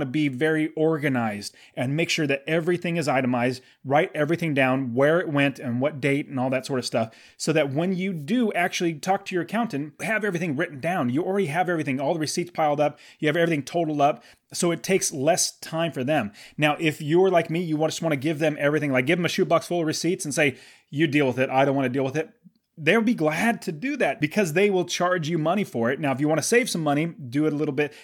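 Nothing in this speech recording stands out as a technical fault, so there's nothing to point to along the way.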